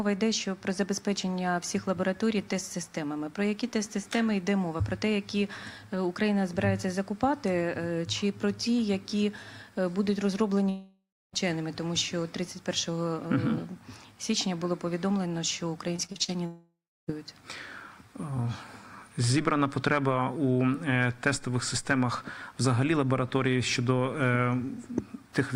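From 10.69 to 11.35 s the sound breaks into a fading buzz and then about 0.28 s of near silence, likely a long network dropout with roughly 0.64 s lost. On a spectrogram the harmonics smear flat, then go dark. From 15.97 to 16.30 s, repeated packet loss (robotic sound) chops the audio with five short holes, the longest 41 ms. It sounds choppy, with pieces missing, and the waveform shows repeated flattened patches. From 16.46 to 17.10 s a similar smeared fade ends in about 0.31 s of quiet, again likely a long network dropout, and the spectrogram again goes blank before the sound resumes.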